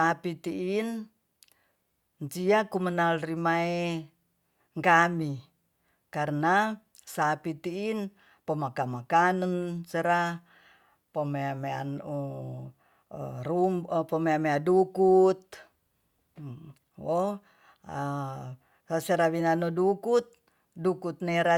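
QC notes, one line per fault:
No technical faults were found in the signal at any point in the recording.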